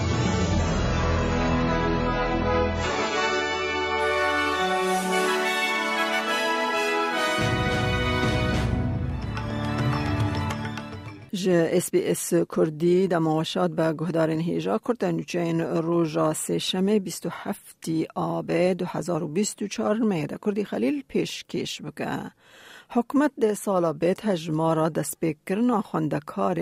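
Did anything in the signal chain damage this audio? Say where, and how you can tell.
Yes. The damage is at the network and playback stage: an adaptive stream starting at a low bitrate. From 0.0 to 4.0 s nothing is heard above 7.6 kHz, and the coding artefacts are heavier. At 4.0 s the full treble returns at once, with no gap. The player likely began on a cheap rendition to start quickly, then stepped up once it had measured the connection. The sound fits AAC at around 16 kbit/s moving to about 96 kbit/s.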